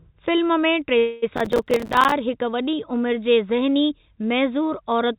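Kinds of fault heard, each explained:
Call audio freeze: From 0.98 to 1.24 s the sound stalls and the last moment is stretched into a decaying buzz for about 242 ms before the audio resumes where it left off. Nothing is lost, but everything after it runs about 242 ms later, likely because packets were held up and the jitter buffer ran dry.
Processor overload crackle: Between 1.37 and 2.12 s a gritty, tearing crackle rides on the speech. It is made of many tiny hard-edged dropouts to silence, a few dozen of them, each consistent with a buffer of around 5 ms missing its deadline, and it stops once the load clears.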